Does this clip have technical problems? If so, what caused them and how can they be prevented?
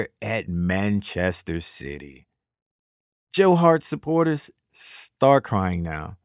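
No, no technical faults here.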